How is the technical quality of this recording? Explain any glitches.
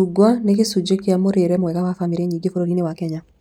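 The recording has one clear fault: a time-stretched section from 1.53 s to the end, just after "nĩ gĩcunjĩ kĩa mũrĩre". Software likely squeezed this stretch to 1.59 times normal speed, dropping short slices to hold the pitch. The pace suddenly lurches forward while the pitch stays put, so the speech turns rushed.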